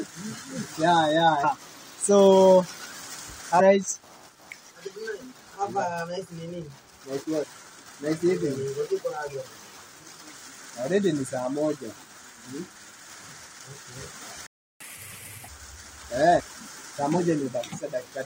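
Short chirps or blips cut through the sound at 1.43–1.45 s, 3.59–3.61 s, 7.42–7.44 s and 12.02 s. Each lasts only a couple of hundredths of a second. This is damaged data in a compressed stream. Corrupted bytes leave the decoder unable to read those frames, so it loses sync, emits a brief garbled burst and jumps ahead to the next valid frame header.

At 14.47 s the audio stops dead for about 0.34 s, until 14.80 s. This is a playback stall. The output went silent because the player likely ran out of buffered data or had its thread blocked, and it held until data was available again.

From 14.80 to 15.48 s the sound runs fast and audibly higher, at 1.5 times normal speed and roughly seven semitones up, before settling back to normal. This is catch-up at higher speed. After the stall, the player resamples its backlog to play it faster and win back the lost time, which raises pitch and tempo together until it is back on schedule.

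One more brief blip at 16.38–16.41 s is another instance of damaged data in the compressed stream, with the same loss of sync and resync at the next frame.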